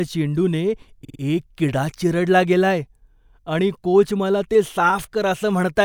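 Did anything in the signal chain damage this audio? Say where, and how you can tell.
Yes. Repeated frames from 1.03 to 1.19 s, just before "एक किडा चिरडला गेलाय": a 52 ms block, likely two compressed frames, plays three extra times at the codec or storage stage, giving an audible stutter and stretching the speech by 157 ms.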